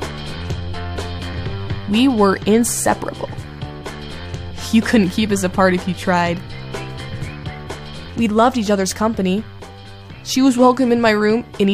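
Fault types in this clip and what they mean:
No technical faults can be heard anywhere in this audio.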